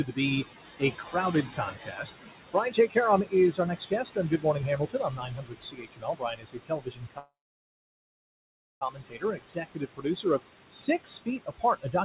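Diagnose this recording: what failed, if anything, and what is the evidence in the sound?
Noise suppressor artifacts run through the whole clip. In the call processing stage, the suppressor pulls the steady background down by about 21 dB frame by frame, so the residual noise dips between phrases and rises under speech.

The same stage also produces speech cut by the noise suppressor. Speech is attenuated at 0.05–0.45 s (about 13 dB), 0.79–2.11 s (about 16 dB), 2.53–10.4 s (about 21 dB, roughly four seconds affected) and 10.72 s to the end (about 21 dB). Because the suppressor classed quieter speech energy as noise, those parts of the speech sound swallowed or faint.

A call audio freeze runs from 7.18 to 8.83 s. The audio stalls for 1.63 s, and about 1.5 s of that is silence. It then resumes exactly where it stopped, so nothing is lost and everything after is delayed by 1.63 s. Late network packets likely emptied the jitter buffer.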